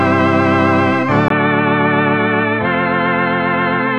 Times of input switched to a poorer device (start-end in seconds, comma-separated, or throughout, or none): 1.28-3.98